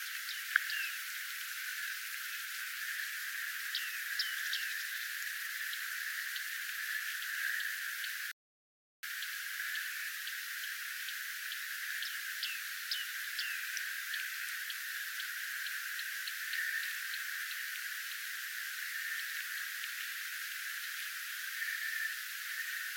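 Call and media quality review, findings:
Rebuffering stall, 8.32 to 9.03 s: audio drops to dead silence for about 0.72 s, then picks up exactly where it stopped, nothing skipped or repeated. Component: playback buffer / network delivery. Mechanism: player drained its downloaded audio, paused until more data arrived, then resumed. No content lost; 716 ms of extra time inserted into the timeline.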